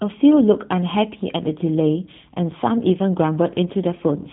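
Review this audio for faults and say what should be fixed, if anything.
Across the whole clip the speech sounds rough and faintly synthetic, with nothing above about 3.8 kHz, so sibilants are dull and the top end is missing. This is G.729 codec damage, plainly audible, and the character fits G.729A at 8 kbit/s. The codec discards the waveform and rebuilds each 10 ms frame from a vocal tract filter, a pitch predictor and a few pulses per half-frame, which leaves this buzzy, band-limited texture. To prevent it, record or route the call with a wideband codec such as G.722 or Opus instead of G.729.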